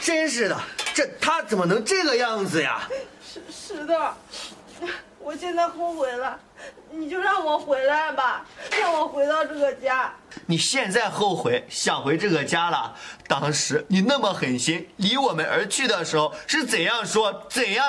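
Nothing stood out as a technical fault anywhere in the audio on listening.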